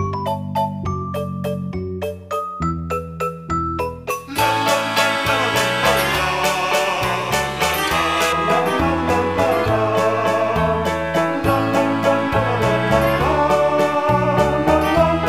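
From 4.10 s to 8.33 s the audio has pre-emphasis left on: the treble was boosted ahead of transmission and the matching de-emphasis never followed. The top end sits about 11 dB higher at 10 kHz than at 1 kHz, a tilt that fits the J.17 curve, so the sound turns thin, bright and hissy. On a spectrogram that stretch shows a block of darker upper bands above a few kHz, and the waveform carries more sharp, spiky detail.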